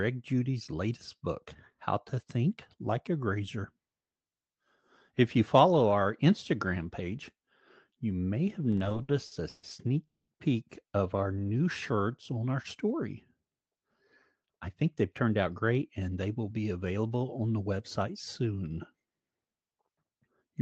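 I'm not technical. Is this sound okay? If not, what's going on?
No. Repeated stalls (stutter), 8.71 to 9.65 s, after "you may have": the speech stops and restarts about ten times, gaps filled by stretched sound, longest 140 ms.

A call audio freeze at 10.07 to 10.30 s puts a 210 ms pause in the speech, mostly silence. It was likely caused by delayed data, with playback resuming where it stopped.

Jitter buffer slow-down, 11.33 to 12.40 s, between "peek of our" and "our story": the speech runs at about 90% speed, same pitch, as the receiver repeats tiny pieces to rebuild its reserve.

Jitter buffer speed-up, 14.41 to 16.27 s, just before "will be available on": the speech hurries to about 108% speed as tiny pieces, roughly 150 ms in all, are dropped to cut delay.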